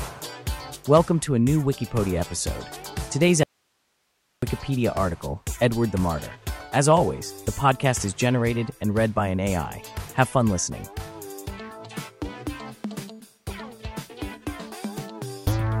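From 3.43 to 4.42 s, an audio dropout to a faint residue, likely lost input, leaves hiss; the waveform abruptly flattens to a thin band.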